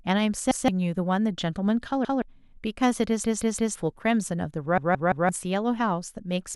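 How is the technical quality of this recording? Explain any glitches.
The speech is broken by four stutters from a repeated buffer. At 0.51 to 0.68 s and 2.05 to 2.22 s, a 0.17 s slice plays twice with a hard join. At 3.24 to 3.76 s and 4.78 to 5.29 s, the same slice plays four times in a row. Each repeat length fits an 8192-sample buffer. Fresh audio arrived late, so the device replayed its last buffer. This cost roughly 0.15 s and half a second of speech respectively.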